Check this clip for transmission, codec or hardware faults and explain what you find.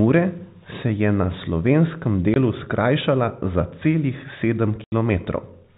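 Two short dropouts interrupt the speech, both from packet loss filled with silence.

Packet loss filled with silence, at 2.34 to 2.36 s and 4.84 to 4.92 s: lost audio was replaced by digital silence. The 20 ms and 80 ms holes fit one and four 20 ms packets, and their edges are abrupt.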